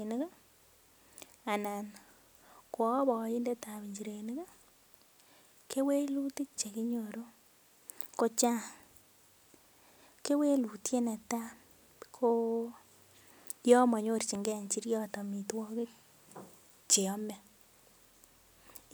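At 14.35 to 14.38 s, just before "njiriot amitwogik", there is a single loud pop. It stands a few decibels above the speech. A sudden voltage pulse, likely from a switch, plug or static discharge, was added to the signal. The speech continues underneath.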